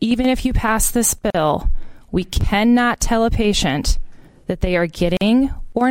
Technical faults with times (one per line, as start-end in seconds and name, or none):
1.30-1.35 gap at a join of encoded pieces
5.17-5.21 gap at a join of encoded pieces